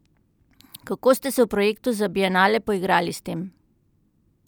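Listening to the recording of speech, nothing stood out as a technical problem at any point.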